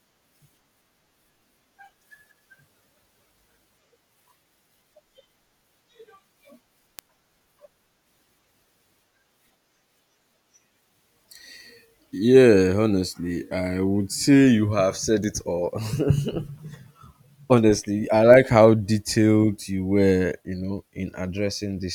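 Three bit error spikes tick through the speech at 6.99, 15.24 and 18.34 s: single flipped-bit samples jumping to about -6, -19 and -12 dBFS, heard as sharp clicks.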